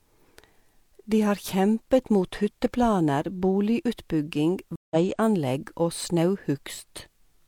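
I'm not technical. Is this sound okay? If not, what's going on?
No. At about 4.76 seconds the speech drops out for about 0.15 seconds. This is a stream reconnect: the connection broke and the player restarted. The speech returns at 4.96 seconds, skipping ahead by roughly a tenth of a second.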